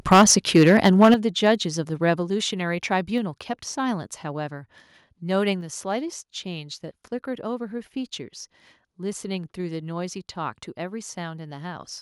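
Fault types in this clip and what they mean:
Microphone overload: From 0.07 to 1.14 s the loudest syllables sound harsh and crackly, with peaks driven about 9 dB past the converter's limit and around 7 percent of the waveform flattened. A milder burst follows from 1.46 to 1.51 s, about 1 dB over. The likely cause is input gain set too high for the converter. Unlike codec distortion, the grit sits only on the peaks and disappears once levels fall.
Microphone volume stepped down: The whole signal, speech and background together, drops abruptly in single steps: about 3 dB at 0.13 s, about 8 dB at 1.14 s right as the heavy clipping ends, and about 4 dB at 2.16 s. The likely cause is the call software reacting to the overload by lowering the device's input volume. Unlike a compressor or limiter, each drop is instant and stays put instead of recovering between phrases.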